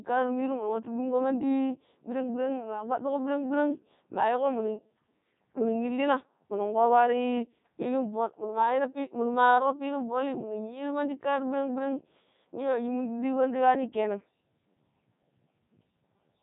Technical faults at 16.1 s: Codec 2 vocoder

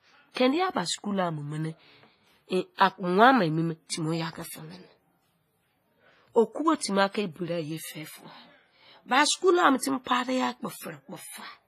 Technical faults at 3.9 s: WMA compression; pre-echo

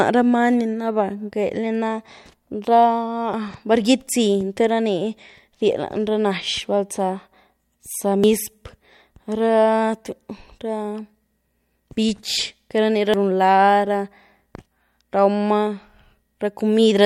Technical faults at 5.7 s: none

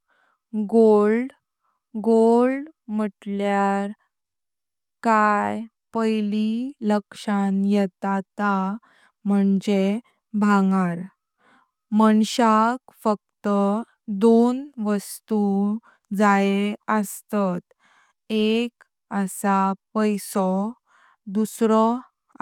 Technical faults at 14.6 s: none

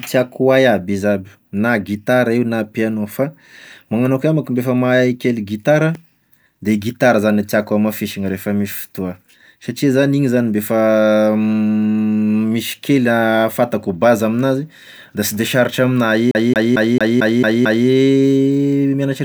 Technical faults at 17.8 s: CD stuck on one turn

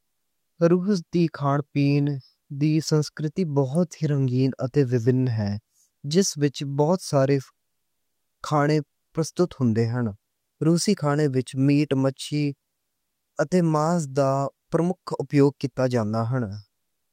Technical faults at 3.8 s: electrical switching spike

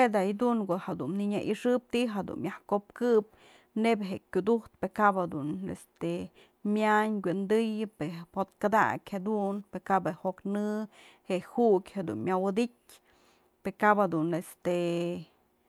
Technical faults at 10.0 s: none

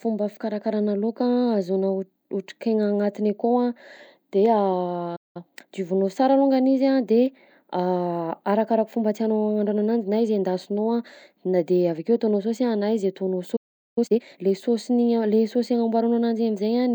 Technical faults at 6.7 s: none

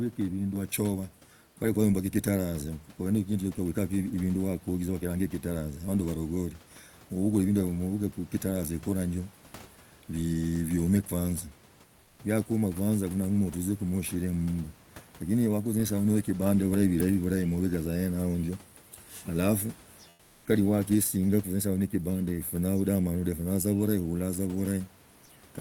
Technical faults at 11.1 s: none

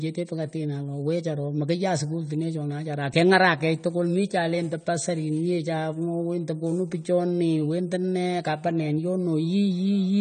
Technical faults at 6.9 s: AAC compression

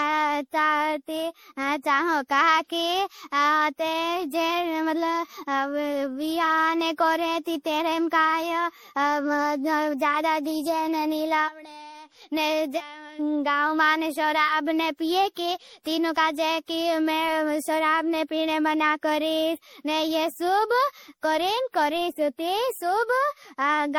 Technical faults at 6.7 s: generation loss

